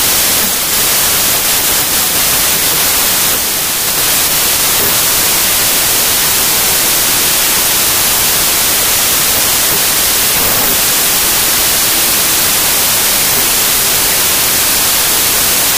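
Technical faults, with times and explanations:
Throughout, wrong sample width: loud broadband noise dominates, with the original buried beneath it, running about 1.33 times too fast and correspondingly higher in pitch. That ratio fits packed 24-bit samples read as 32-bit words. Each read straddles sample boundaries, so most values mix bytes from neighbouring samples and only some keep the true top bits. On a spectrogram, a dense noise floor covers everything. The waveform looks jagged.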